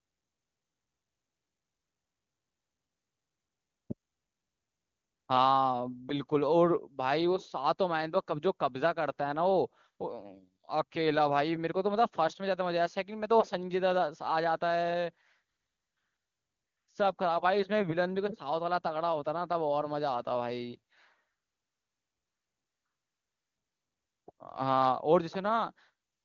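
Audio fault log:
No faults logged; the speech carries the band-limited HD Voice character of AMR wideband (HD Voice) codec, with the top band up to 7 kHz filled by shaped noise, and the lack of roughness points to the codec running at its highest rate, which fits 23.85 kbit/s.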